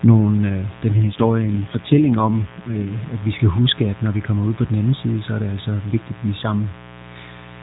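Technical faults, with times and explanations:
Throughout: mains buzz. Switching spikes from the power supply leak into the signal path twice per 60 Hz cycle, stacking harmonics of 60 Hz up into the kilohertz range. The result is a steady, raspy buzz sitting roughly 20 dB below the speech for the whole clip.
0.92–3.07 s: AMR rate drop. The mobile link forces the AMR narrowband codec down to a leaner mode, shifting bits from the voice model to error protection. The 4 kHz band and continuity hold, but the speech turns rougher and more synthetic, consistent with a fall from about 12.2 to 5.9 kbps, before recovering just ahead of "at vi skal huske".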